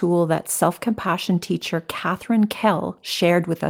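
Nothing in the speech stood out as a technical fault on listening.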